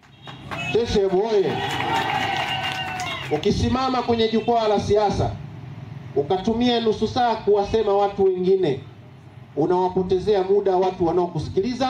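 From start to finish there's gain pumping going on. The gain keeps ducking down every time something loud comes through, with the level swinging by around 5 dB. That points to the input gain being cranked way too high for the mic, with a fast limiter or compressor likely clamping down on each peak. The result is squashed audio where loud and soft moments sit uncomfortably close together.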